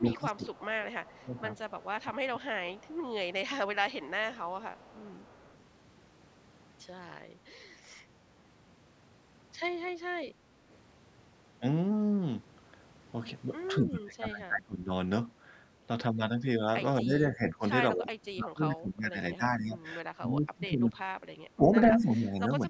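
Speech suppressed in double talk opens the clip at 0.0 to 0.45 s and returns at 1.05 to 1.41 s and 2.04 to 2.34 s, with dips of about 15 dB. The level sinks while the other side talks over it. The most likely cause is an echo canceller that could not separate the local talker from its own loudspeaker echo, and so turned both down.

Echo leak runs from 0.14 to 2.97 s. A faint copy of the speech trails 234 ms behind the original, about 25 dB below it. This is likely loudspeaker sound that the microphone picked up and the canceller did not fully remove, so it was sent back down the line.

Deeper suppression, around 25 dB, hits from 3.18 to 4.08 s. A second leak overlaps it from 3.9 to 5.57 s, now about 30 dB down and with the same 234 ms lag. Suppression strikes again from 13.79 to 14.91 s, at roughly 25 dB. It also covers most of the final stretch, from 17.02 s to the end, with dips of about 20 dB.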